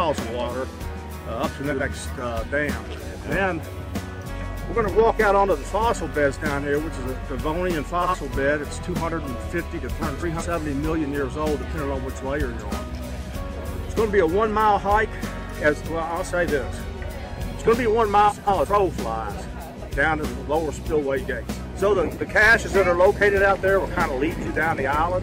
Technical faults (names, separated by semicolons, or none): frames out of order